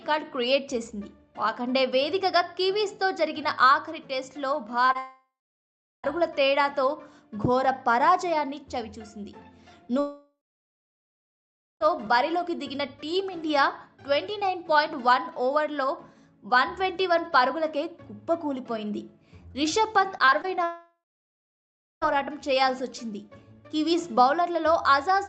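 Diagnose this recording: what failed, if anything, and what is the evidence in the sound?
Short concealed packet loss at 4.85 to 4.91 s and again at 4.93 to 4.96 s is a network-stage fault heard as two quick smears. About 40 ms and then about 20 ms of audio arrived too late for the decoder. Each time, the receiver filled the hole by extending the preceding sound and then blended back into the real signal. The result is a brief wobble rather than a clean cut.

Long network dropouts occur at 4.98 to 6.05 s, 9.99 to 11.82 s and 20.64 to 22.03 s. Each begins with the last sound stretched into a fading buzz or hiss. Then it goes silent for about 0.74 s, 1.46 s and 1.04 s respectively, and the audio resumes further on with the intervening stretch gone. The likely cause is the network delivering nothing for over a second, which exhausts the receiver's concealment.

Repeated packet loss, heard as a robotic sound, runs from 20.18 to 20.46 s, just before the third dropout. 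Four separate holes, the longest about 23 ms, are each patched by extending the previous sound, and the next hole arrives before the signal settles. About a quarter of that span is synthesised, which gives a choppy texture with pieces missing. This is again a network fault.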